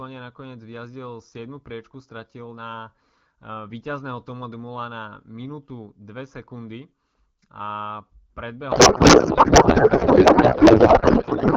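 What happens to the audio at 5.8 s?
Nothing goes wrong at 5.8 s: the speech continues intact there, carried cleanly by the AMR wideband (HD Voice) codec at 12.65 kbit/s.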